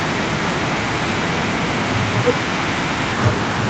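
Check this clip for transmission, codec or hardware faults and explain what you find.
No transmission, codec or hardware faults can be heard in the speech, which stays steady and continuous, with nothing above about 8 kHz and the lowest bass trimmed, as expected from normal wideband call processing.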